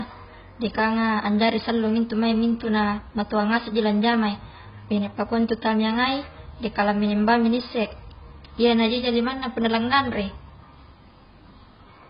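Throughout the speech, heavy AAC compression is audible, likely from AAC-LC at a very low rate, which fits roughly 16 kbps. Nothing remains above 5.1 kHz, so the sound is dull, and coarse quantisation leaves smeared, fizzy sibilants and a warbling texture.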